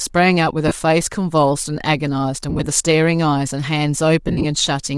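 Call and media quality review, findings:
Bluetooth LC3 compression, whole clip: breathy, grainy top end on the speech; upper spectrum thin and noise-like. Likely LC3 codec damage at a modest rate, high bands zeroed and filled with noise. Texture fits 7.5 ms frames and roughly 48 kbps.

Lost LE Audio frames, 0.68 s: 30 ms noisy smear; decoder repeated the last spectrum with random signs.
2.50–2.66 s: scattered dropouts over 165 ms, longest run about 30 ms, smeared fills.
4.28–4.45 s: scattered over 165 ms, longest run about 50 ms, concealment fading toward silence.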